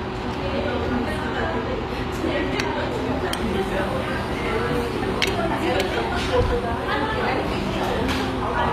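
Across the whole clip, HE-AAC compression, likely at a low bitrate around 24 kbps, leaves the treble rebuilt and gritty; a spectrogram shows copied-looking upper bands cutting off near 14.9 kHz.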